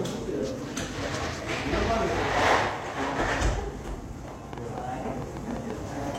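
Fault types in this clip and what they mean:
Train of clicks: uneven ticking, about ten pops from 3.88 to 6.16 s at 4.4 per second, peaking about 5 dB over the sound, likely interference or a faulty connection.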